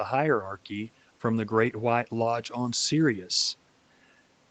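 No technical faults can be heard anywhere in the speech, and the lowest bass being trimmed is simply the normal work of the call's microphone processing.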